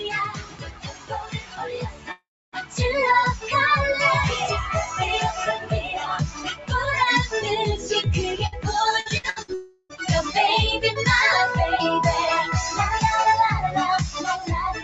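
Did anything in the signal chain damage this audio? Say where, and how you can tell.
Yes. The damage comes from call processing and the network.

A noise suppressor applied to music or sounds is active throughout. It is built for speech, so it treats sustained sound as noise and pulls it down. Its attenuation swings by roughly 15 dB, making the level pump. On a waveform, the envelope breathes in and out rather than following the sound's own dynamics.

Several passages are sound cut by the noise suppressor. The first 2.8 s sinks by up to about 14 dB. Shorter dips follow at 3.37–3.53 s (about 10 dB), 5.58–6.07 s (about 10 dB) and 6.29–6.71 s (about 12 dB). On a spectrogram, held energy and decays fade abruptly while onsets stay bright.

The long network dropouts are at 2.11–2.55 s and 9.54–9.92 s. In the first, a fading continuation is followed by about 280 ms of silence. The second is filled entirely by about 355 ms of smeared, decaying continuation. 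The likely cause is audio failing to arrive over the network. On a spectrogram, the harmonics freeze and blur, then drop out or fade.

A burst of packet loss at 8.46–8.55 s replaces about 60 ms with a held, fading copy of the preceding sound. It shows as a brief smeared block on the spectrogram, and the waveform resumes slightly further on.

Repeated packet loss (robotic sound) runs from 9.00 to 9.51 s. Four gaps, the longest 64 ms, conceal nearly half the span, so the sound turns choppy. On a spectrogram, stretches of repeated, frozen texture alternate with fresh material.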